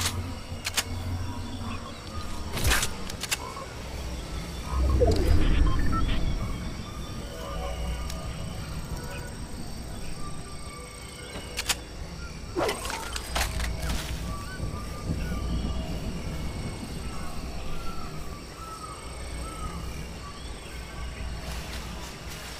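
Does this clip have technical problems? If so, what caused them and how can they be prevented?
No, nothing in this audio registers as a technical fault, so there is no cause to trace and nothing to prevent.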